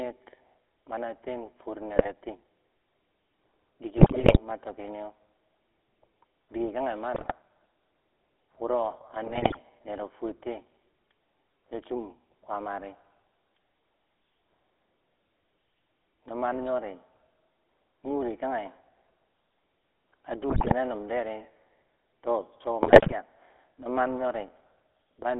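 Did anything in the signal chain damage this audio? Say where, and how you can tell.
Yes. At the codec stage, GSM full-rate coding runs throughout, with the band held to 300 Hz–3.5 kHz. Its coarse pulse excitation gives the speech a buzzy, gravelly roughness that fits 13 kbps full rate.

On the radio link, GSM bit errors corrupted the decoder's filter, pitch and gain values at 1.96–2.10, 3.96–4.39, 7.14–7.33 (just after "dike kange"), 9.24–9.60, 20.50–20.73 and 22.82–23.13 s. Each burst breaks into squawks, pops and gargling.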